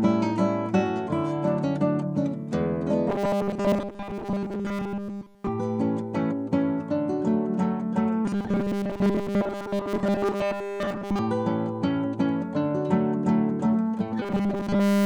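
Robotic sound from repeated short buffers hits at 3.09–5.48 s, 8.25–11.20 s (less completely) and 14.22 s onward. It's a rigid 200 Hz buzz, likely from a 5 ms chunk looping.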